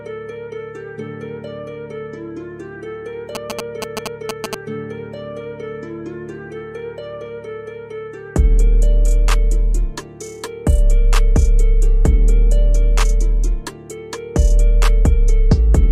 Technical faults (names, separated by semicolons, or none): GSM signalling bursts